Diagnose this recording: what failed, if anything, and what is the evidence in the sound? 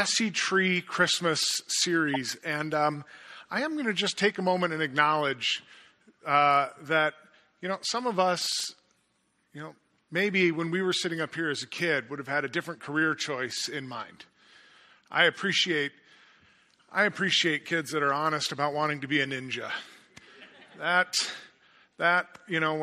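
Codec: a corrupt frame decoded at 2.07–2.17 s, its flipped bits played anyway, gives a short chirp, squeak, blip or burst of noise; the spectrogram shows misplaced energy blocks spanning several frames.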